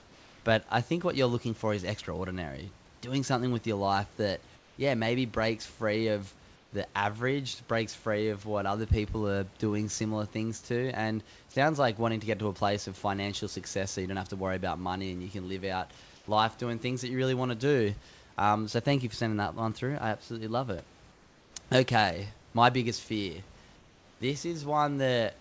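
At the start, from 0.00 to 0.44 s, the faint room background becomes a flat, featureless hiss about 2 dB quieter. The same swap returns from 4.56 to 4.76 s, between "with your life that" and "yeah maybe breaks free"; from 6.56 to 6.72 s, between "maybe breaks free of" and "the average breaks free"; from 16.16 to 16.28 s; and from 21.12 to 21.56 s, each time about 2 to 4 dB down. This is comfort noise in place of the background. The sender's voice detector likely stopped transmitting in the pauses, and the receiver filled them with synthetic noise shaped roughly like a background that sits about 26 to 31 dB below the loudest speech.

At 11.52 s, just before "like wanting to get", the sound is briefly replaced by comfort noise for about 40 ms, clipping roughly 20 ms of sound. This is sound dropped by the voice detector: it likely mistook that sound for background and switched to comfort noise until it triggered again. 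Throughout, the call path leaves nothing above 8 kHz, which fits a wideband G.722 codec.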